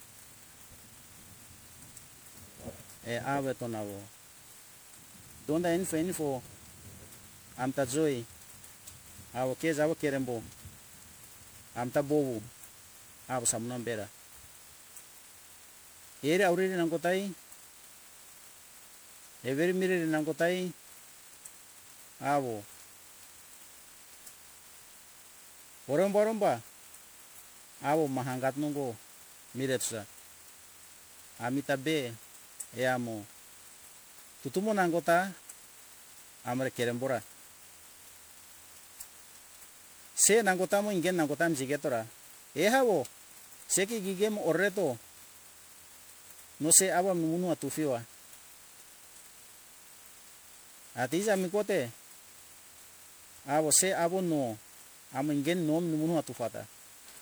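Throughout the speech, generation loss gives a swirly, hollow, smeared quality, with consonant attacks blurred. The likely cause is repeated MP3 re-encoding, around seven passes, fitting 128 kbit/s. A spectrogram shows accumulating holes and nothing above 20.9 kHz.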